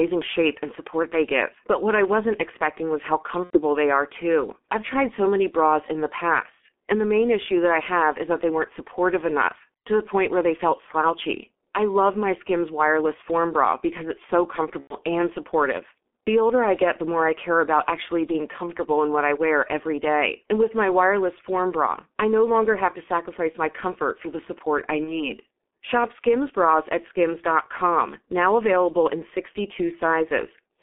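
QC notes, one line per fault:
Throughout: G.723.1 codec. The speech sounds muffled and hoarse, with consonants smeared together and no air or crispness on top. The band is held to about 250 Hz to 3.4 kHz, so lows and sibilance are gone. The heavy, grainy quality fits the roughly 6.3 kbit/s mode of this early telephony codec. It rebuilds the voice from a coarse model refreshed only every 30 ms, so fast articulation blurs.
3.44–3.60 s, 14.81–14.96 s, 25.04–25.29 s: VoIP packet loss concealed by the speech codec. Each time, the voice stretches and fades, then stays weak and distorted briefly as it returns. The first comes after "wasn't expecting was how" and before "they are too I've". The second comes after "bra because it's so" and before "and supportive the older". The third follows "for the support I". The first two gaps point to about 90 ms missing (three frames), and the third to a single 30 ms frame. 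The decoder filled each gap by repeating its last pitch and filter at falling gain, and its frame-to-frame memory slowed recovery.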